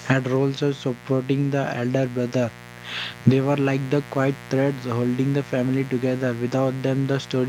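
A steady, raspy buzz sits under the speech from start to finish, fairly prominent at roughly 20 dB below the speech level. This is mains buzz on a 60 Hz supply. Sharp switching spikes, from something like a dimmer, a rectifier or an unshielded cable, couple into the signal path twice per mains cycle. That spiky waveform carries a dense series of 60 Hz harmonics reaching up into the kilohertz range, which gives the buzz its edge instead of a smooth hum.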